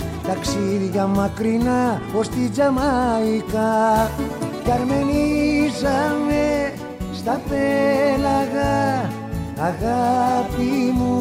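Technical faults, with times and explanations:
Nothing technical stands out here; the audio holds steady the whole way with no glitches or interruptions to flag.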